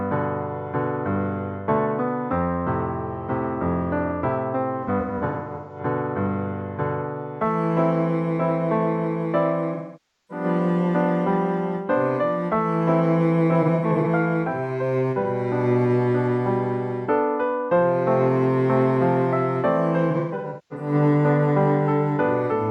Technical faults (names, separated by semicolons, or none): AAC frame loss with concealment